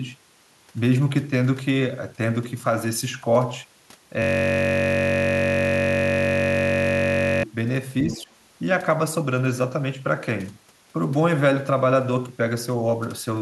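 From 4.22 to 7.43 s a system hang loop takes over: a 21.33 ms slice of audio repeats about 150 times, giving a steady buzz at 46.9 Hz, which fits a 1024-sample buffer. On a spectrogram it appears as evenly spaced harmonics at 46.9 Hz intervals, and the waveform shows an identical repeating block.

Between 8.07 and 8.28 s the speech dips briefly, by about 5 dB over roughly 150 ms in total, likely speech suppressed in double talk as an echo canceller turned both sides down at once. On a spectrogram this shows as a short band of weaker energy, and the waveform envelope narrows.

Overlapping that dip, from 8.09 to 8.23 s, a fainter second voice comes through about 15 dB below the main speech, likely the other side's voice leaking through from a loudspeaker past the echo canceller. It shows as faint extra harmonic traces.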